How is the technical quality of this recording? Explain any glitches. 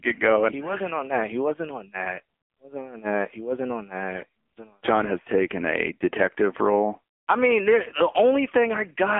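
Poor: a low-rate mobile phone codec has degraded the whole recording. From start to finish, the AMR narrowband mobile codec at 6.7 kbps rebuilds the speech from a vocal-tract model driven by a few pulses per 5 ms slice, confined to a 250 Hz–3.4 kHz line band. The speech sounds heavily buzzy, synthetic and muffled, with thin lows and dull consonants.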